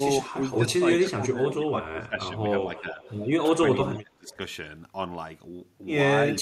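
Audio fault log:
0.00–0.24 s, 0.55–2.30 s, 2.64–3.02 s, 3.51–4.40 s, 6.29–6.36 s, speech suppressed in double talk: the level dips in short pieces, by about 5 dB at the start and end and as much as about 20 dB around 3.5–4.4 s. This is likely an echo canceller turning down this talker while the other side is also speaking.
0.33–1.06 s, 2.75–3.17 s, 3.96–4.32 s, echo leak: a faint delayed copy of the speech trails about 310–320 ms behind, about 20 to 30 dB below it. This is likely loudspeaker echo that the canceller did not fully remove.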